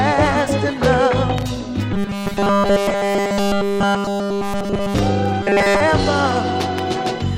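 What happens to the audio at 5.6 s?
From 5.43 to 5.80 s the sound collapses into a rigid, metallic buzz pitched at 200 Hz, following the original only loosely. This is robotic sound from repeated short buffers. The likely cause is new audio arriving too late, so the playback fills the gap by looping the last 5 ms chunk over and over, skipping the real audio. Essentially the whole span is made of these repeats, and their rate sets the fixed buzz pitch.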